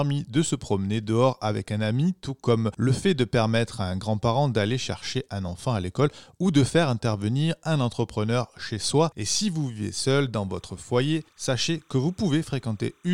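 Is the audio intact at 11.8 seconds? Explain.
No. A faint, steady chirping warble sits behind the speech from 10.51 s to 13.13 s: timecode bleed, with 30 fps linear timecode flipping between tones near 1 and 2 kHz.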